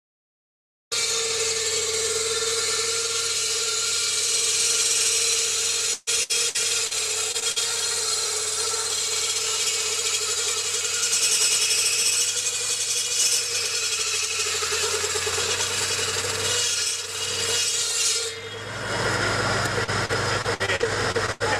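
Repeated packet loss (robotic sound) runs from 5.93 to 7.00 s. Lost or late packets leave repeated holes, about 0.3 s in all and the longest 134 ms. Each is patched by extending the preceding sound, so the audio turns choppy and robotic.

Short concealed packet loss follows at 7.32–7.36 s, 7.40–7.44 s and 7.52–7.58 s. Each hole of 20 to 40 ms is filled by continuing the last sound before blending back, heard as a brief smear or wobble.

Repeated packet loss (robotic sound) returns from 19.84 to 21.42 s. More frequent, shorter holes total about 0.36 s, the longest 84 ms. The concealment gives the same choppy texture.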